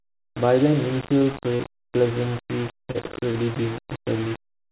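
From start to finish the speech is coated in a coarse, grainy distortion that shifts with the voice itself, roughening every syllable, with the noise sitting not far below the speech. Quiet passages turn gritty and the softest moments sputter between two steps. The likely cause is low bit depth without dither: the samples appear to have been rounded to only about 4 bits, so the error tracks the signal instead of forming a steady hiss.

At about 1.57 to 1.62 s a brief smear passes through the sound, a short stretch where the voice seems to hang on its last shape before blending back in. This is short concealed packet loss. Roughly 30 ms of audio never arrived in time, and the receiver filled about 28 ms of the hole by extending the preceding sound before crossfading into the real signal.

From about 2.91 to 3.38 s the voice turns choppy, with small pieces missing. This is repeated packet loss. 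Four separate gaps, the longest about 35 ms, fall within this half second. Each is patched by continuing the last sound, and the next gap arrives soon after. Roughly a fifth of the stretch is filled-in audio. Throughout, the call path leaves nothing above 4 kHz, which fits a 64 kbps G.711 A-law link.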